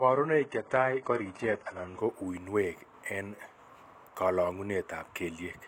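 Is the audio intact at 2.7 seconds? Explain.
Yes, the speech at 2.7 seconds is intact, with no audible fault at that moment.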